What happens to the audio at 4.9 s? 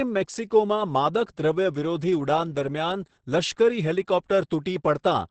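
At 4.9 s the speech carries Opus voice compression, present through the whole clip. Nothing sounds above about 8.6 kHz, so it is dull and muffled. The SILK coder quantises the excitation coarsely, making it hoarse and slightly robotic, which fits roughly 10 kbps.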